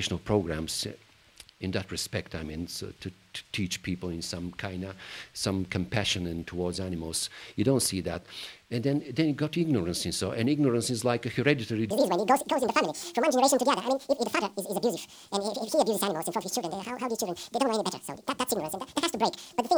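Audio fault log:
11.9 to 19.8 s: section at the wrong speed, running 1.93 times too fast, so the sound turns hurried and about ten semitones higher, likely from a mismatched playback clock.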